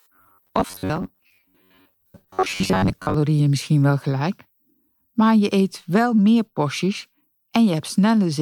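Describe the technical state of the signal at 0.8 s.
At 0.8 s the speech has a rigid, metallic buzz pitched near 94 Hz, lasting from 0.01 s until 3.14 s, just before "misschien wel gelijk". This robotic sound from repeated short buffers likely comes from audio arriving too seldom, with roughly 11 ms segments replayed and about half the real signal skipped.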